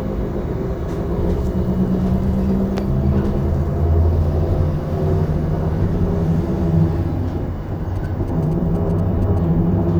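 From 7.96 to 9.39 s there's a burst of GSM signalling bursts: a nearby 2G phone handshaking with its network, its radio pulses rectified by the audio circuit. You hear a galloping dit-dit-dit of short 217 Hz buzzes, sitting well under the main sound.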